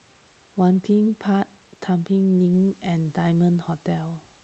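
No faults found in this speech clip: the call path's Opus coding limits the audio to about 8 kHz, as expected for its settings, and the room noise sits about 35 dB below the speech.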